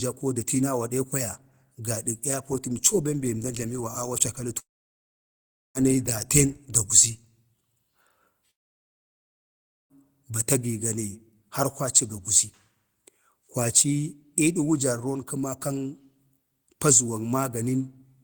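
Long network dropouts occur at 4.59 to 5.78 s and at 8.51 to 9.93 s. In the first, the speech breaks off and the last sound is drawn out briefly as a fading buzz, leaving about 1.1 s of silence; in the second, the speech drops straight into about 1.4 s of silence. The speech resumes further on, with about 1.16 s and 1.4 s of it skipped rather than delayed. The likely cause is a stretch of audio packets that never arrived, which the receiver papered over before falling quiet.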